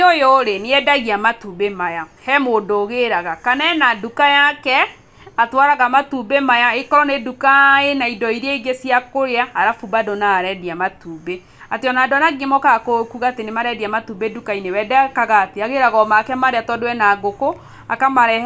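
No technical faults occur at any point in the recording.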